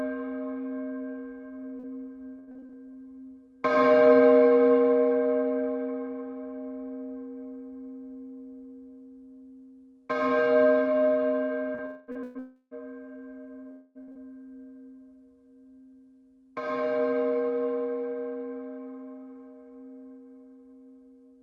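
From 1.79 to 2.76 s the stream suffers repeated packet loss (robotic sound): six separate holes in under a second, the longest 83 ms, each patched by extending the last bit of audio before the next hole arrives. About 218 ms of concealment, nearly a quarter of that stretch, gives the sound a choppy, metallic, stuttering quality with pieces missing. The same pattern returns from 11.75 to 12.38 s with three gaps, the longest 117 ms, so close to 30 percent of that span is synthetic filler.

Overlapping and following that second stretch, a sound is held and then dies away from 11.86 to 12.11 s, again from 12.39 to 12.74 s, and once more from 13.71 to 13.98 s. These are each likely a long network dropout, with a fifth to a third of a second of audio never arriving. The receiver stretches the last sound into a buzz or hiss for about 220, 320 and 240 ms. Only the middle one decays into roughly 30 ms of silence before the audio returns, and it returns further along, with the lost portion gone. 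Around the first of these, the timing also shifts by roughly 20 ms.

At 14.03 to 14.11 s a burst of packet loss drops about 40 ms of consecutive audio. Concealment carries the preceding sound forward for about 47 ms while lowering it, so it becomes a brief held buzz or fading hiss before the stream picks up again past the missing piece.

Straight after, at 14.12 to 14.18 s, a short concealed packet loss removes another 40 ms that missed the decoder. Roughly 35 ms is filled by extrapolating the last sound and crossfading back into the real signal, heard as a quick smear or wobble where a short transient can simply vanish.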